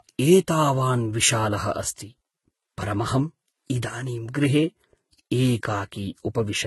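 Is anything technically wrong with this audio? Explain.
Yes. Throughout the speech, the sound carries the marks of transcoding between lossy codecs. It likely went through a low-rate HE-AAC encode first, then a Vorbis encode at a moderate rate. The second encoder spends bits on the first one's artefacts and adds its own. Nothing remains above 11.8 kHz, the lowest cut-off in the chain. The result is dull and band-limited, with the different codecs' artefacts heard together.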